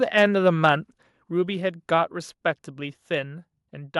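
From 0.18 to 0.21 s the peaks flatten with a harsh, crackling edge, likely microphone overload: input driven about 2 dB past the converter's limit, clipping a small fraction of samples. At 1.02 s the speech and background drop abruptly by about 4 dB, likely a microphone volume step-down where the input gain was lowered in one step.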